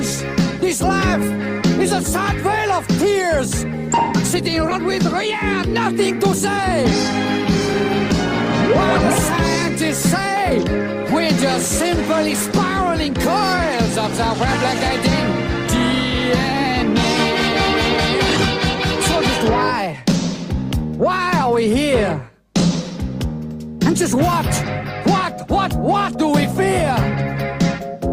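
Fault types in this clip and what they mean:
Skip ahead: about 400 ms of audio was dropped while later audio was already waiting, so at 4.71–4.73 s playback jumps straight forward, joining both sides with no gap.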